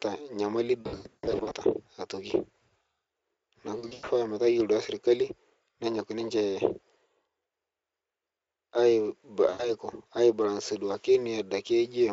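Around 0.81 to 1.64 s, VoIP packet loss concealed by the speech codec kicks in: about half a second of audio goes missing in bursts up to 140 ms, and the decoder fills the gaps by stretching the last sound into a fading buzz. Smaller repeats follow at 3.79 to 4.10 s and 9.49 to 9.73 s, just before "aibalansie duake", with the Speex coding itself sounding clean.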